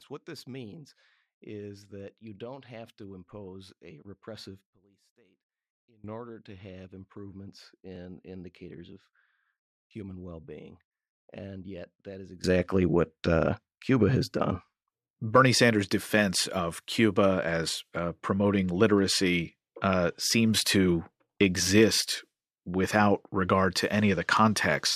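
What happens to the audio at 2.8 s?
Nothing goes wrong at 2.8 s: the speech runs on cleanly through that moment with no dropout, click, distortion or other fault.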